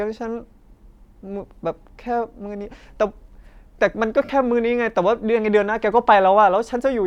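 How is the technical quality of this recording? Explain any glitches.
The recording has one clear glitch, a brief dropout in the speech caused by lost LE Audio frames.

From 4.23 to 4.29 s, about 52 ms of audio is missing, spread over roughly 60 ms and mostly in one run of about 50 ms. That pattern fits several consecutive 7.5 ms frames going missing. The LC3 decoder filled the gap by repeating the last good spectrum with randomised signs, fading it as the loss continued. The speech there turns into a short, noisy smear that thins out before normal speech resumes.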